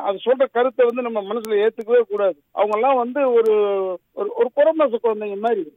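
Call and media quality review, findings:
Word clock ticks, 0.17 s to 5.66 s. Sharp ticks at a steady rate, roughly every 0.2 s, uneven strength. Receiving digital input is not locked to the sender's clock. The drift of roughly 150 ppm drops or repeats one sample per slip.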